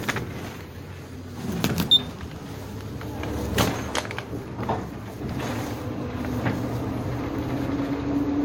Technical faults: transcoding between lossy codecs

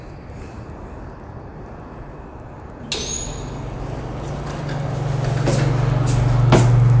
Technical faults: resampler restarted on every block

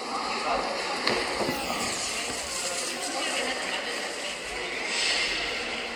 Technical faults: none

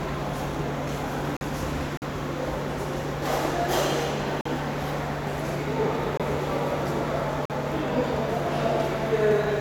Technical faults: gap between chunks; Bluetooth dropout

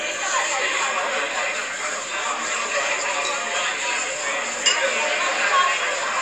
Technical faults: none

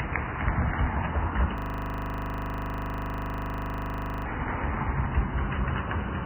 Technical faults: Vorbis compression; system hang loop

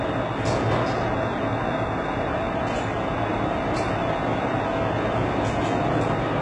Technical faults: HE-AAC compression

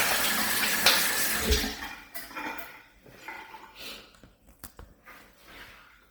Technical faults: Bluetooth LC3 compression

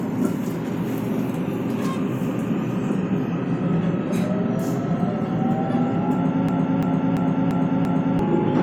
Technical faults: system hang loop

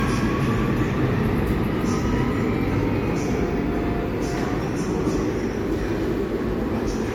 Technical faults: low-bitrate audio saved at a high bitrate

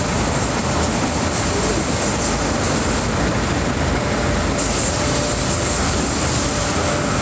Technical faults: none

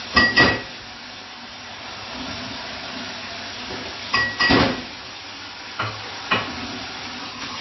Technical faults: MP3 compression

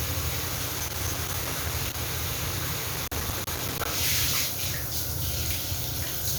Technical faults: loose connector crackle

